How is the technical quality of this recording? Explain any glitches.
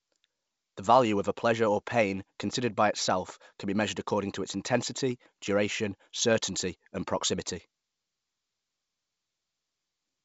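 No glitches or faults heard.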